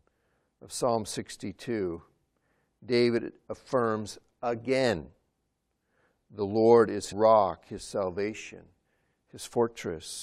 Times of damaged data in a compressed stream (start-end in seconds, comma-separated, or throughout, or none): 7.11